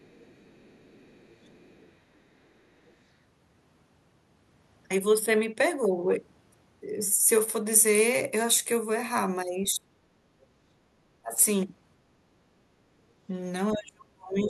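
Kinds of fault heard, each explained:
Other side's voice leaking through: at 0.0–1.88 s, 2.88–2.93 s, 9.66–10.46 s and 14.38–14.49 s, a faint second voice sits under the speech, roughly 20 to 40 dB down, likely loudspeaker playback the echo canceller failed to subtract from the microphone.
Speech suppressed in double talk: at 9.74–9.88 s, 11.22–11.41 s and from 13.72 s to the end, the talker's speech sags by up to around 35 dB while both ends talk, likely the canceller mistaking near speech for echo and attenuating everything.
Background gated by the echo canceller: around 10.2–10.34 s the room sound dips by about 7 dB for roughly 150 ms, as the canceller clamps the microphone down while the loudspeaker plays, then releases and the ambience returns.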